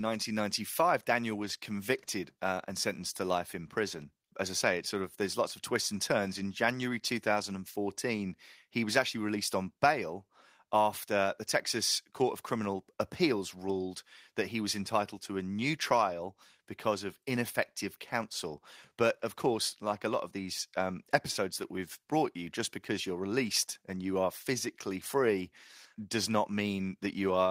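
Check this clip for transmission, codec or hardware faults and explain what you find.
No faults can be heard anywhere in the speech. There is nothing to report at any point in the recording.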